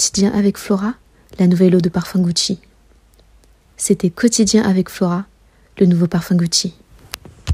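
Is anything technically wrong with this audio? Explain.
No, nothing technically wrong.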